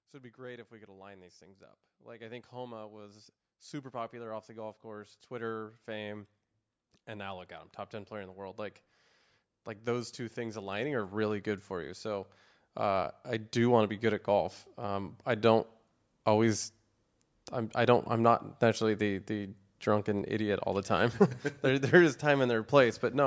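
Speech heard through call microphone processing, with nothing above 8 kHz, shows automatic gain rising from 0.11 to 6.31 s (about 13 dB) and 9.84 to 15.66 s (about 10 dB). Background swells along with the voice, unlike a talker moving closer.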